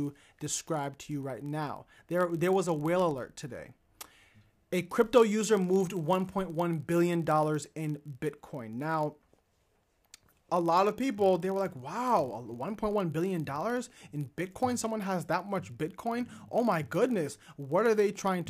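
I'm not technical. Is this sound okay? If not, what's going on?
No. A block size mismatch (padded) runs through the whole clip. Each chunk of audio arrives slightly short, and the gap is filled with silence. That causes a steady buzz, 43.1 times a second, which fits a 1024-sample block. The speech also plays very slightly slower.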